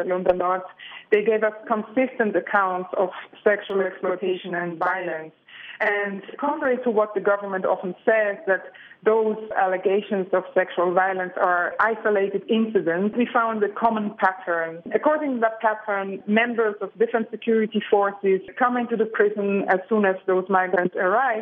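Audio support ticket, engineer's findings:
Channel delay (doubling), 3.70–6.65 s: equal-level copy 46.44 ms late, heard as slap doubling. One channel lags before mono sum; fits a 2048-sample buffer.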